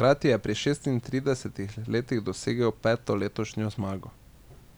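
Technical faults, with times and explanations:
No technical faults are heard in this clip.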